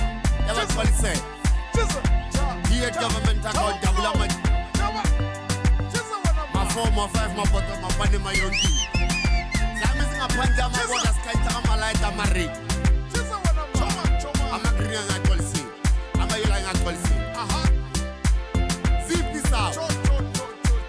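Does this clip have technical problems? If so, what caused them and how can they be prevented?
No, no technical problems can be heard here.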